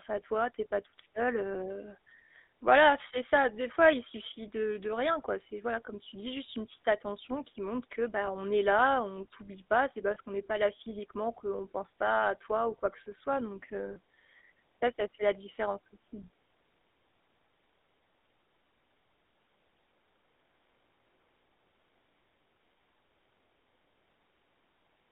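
Throughout, the speech carries the GSM full-rate codec's plainly audible buzzy, gravelly roughness, confined to roughly 250 Hz to 3.7 kHz. Unlike a simple band-limited phone line, the grit comes from pulse-driven vocal-tract modelling with sparse excitation, which fits the 13 kbps GSM full rate.

Lost GSM frames occur at 4.12 to 4.15 s, between "fois il" and "de de rien quoi", at 10.14 to 10.17 s, just before "qu'on n'est pas là", and at 13.92 to 13.97 s. Each is a 20 to 40 ms metallic ring as the last good frame repeats, not a clean silent dropout.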